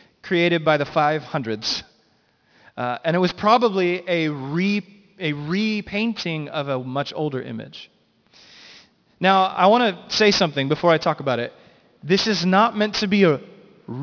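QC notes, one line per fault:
Throughout, aliasing: sibilants and fricatives in this speech turn gritty and metallic, and the spectrum runs hard up to about 5.5 kHz. This points to resampling to around 11 kHz with no anti-alias filter, so energy above 5.5 kHz folds back down to unrelated, inharmonic frequencies at roughly 15 dB below the speech. A simple low-pass or band limit would only sound dull. Here the added tones are harsh and fail to follow the voice's pitch.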